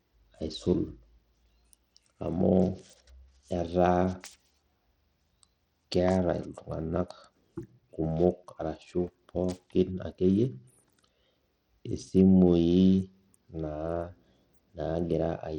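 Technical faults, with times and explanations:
Throughout, likely Bluetooth SBC compression: the speech sounds gritty and dulled, with treble flickering in and out as starved upper sub-bands lose their bits, which fits a bitrate near 80 kbps. A spectrogram shows patchy, blocky gaps high up and aliasing streaks.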